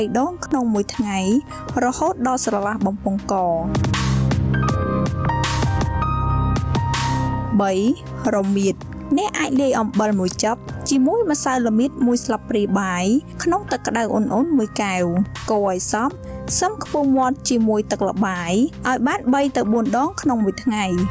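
Throughout the clip the level keeps lurching by around 10 dB. Loud and quiet passages sit unnaturally close together, and the whole thing sounds squashed. That is gain pumping, likely from the input gain being set far too high and a fast limiter or compressor clamping down on every peak. The audio has also passed through call microphone processing, with nothing above 8 kHz.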